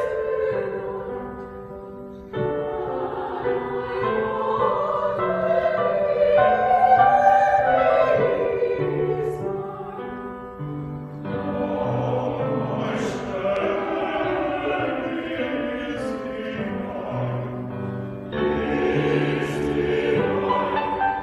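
The audio carries a single loud pop from 13.56 to 13.59 s, a sharp click standing a few decibels above the surrounding level while the sound continues underneath. The likely cause is a voltage pulse from a plug, switch, static discharge or driver glitch entering the signal path. On a waveform it shows as one narrow spike with perhaps a brief ring; on a spectrogram, a thin vertical stripe spanning nearly all frequencies.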